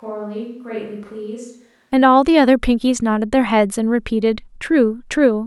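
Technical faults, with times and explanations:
0.00–1.92 s, switch to a distant microphone: already under way when the clip opens, the speech sounds roomy and hollow, thin in the bass and roughly 10 dB quieter, with room noise sitting about 40 dB below it, until at 1.92 s the close, full sound returns abruptly. The likely cause is a fallback to a microphone further away. Unlike a simple gain drop or EQ cut, the room reflections and background noise rise together with the fall in level.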